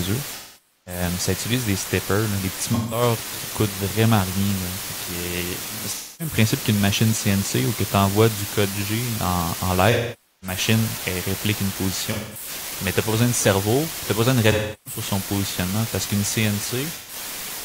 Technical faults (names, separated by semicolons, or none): low bit depth with dither; AAC frame loss with concealment